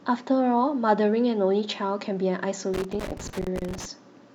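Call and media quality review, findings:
Irregular burst of crackle and scratching over the speech, 2.74 to 3.85 s. Loose connector crackle: worn or dirty contact in a cable or jack making and breaking as it moves, chopping the signal, with any DC on the line adding pops.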